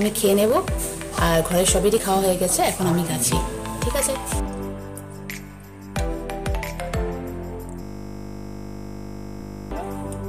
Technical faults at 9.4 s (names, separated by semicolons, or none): system hang loop; audio missing between chunks